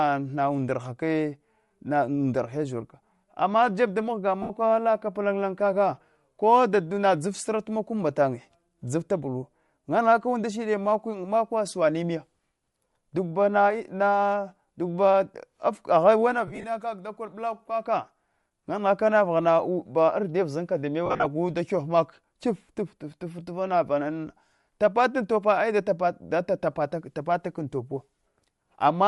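Bluetooth LC3 compression runs through the whole speech clip. The upper spectrum sounds thinned and refilled with noise, giving a plainly audible breathy, grainy edge. That is likely the LE Audio transform codec, and the texture fits a 48 kbps stream with 7.5 ms frames.

Lost LE Audio frames come next, at 4.42 to 4.50 s, between "ama jeb da mghaga" and "ala kap lanlan kaka". About 75 ms of audio drops, and the decoder fills it by reusing the last spectrum with scrambled phase, so the sound smears into noise. At 16.47 to 16.65 s, just before "kaka dakor", the losses scatter over about 165 ms, with the longest gap near 30 ms. At 21.06 to 21.26 s, before "da kyef", they spread across about 195 ms, with runs up to roughly 50 ms, and the concealment thins out during the longest gaps.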